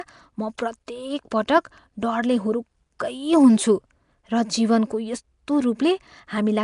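Speech clip with a rough, hissy halo and a smeared, underwater feel throughout, with nothing above 10.6 kHz. That's likely Nellymoser compression, sounding like a bitrate around 44 kbps. There's also pre-echo at 0.58 s and 0.87 s, where a brief hiss of about 10 and 13 ms leaks ahead of sharp attacks and softens them.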